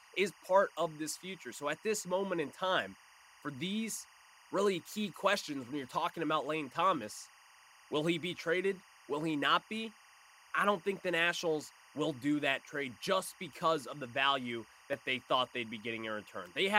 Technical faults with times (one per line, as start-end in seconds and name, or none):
0.00-16.78 timecode bleed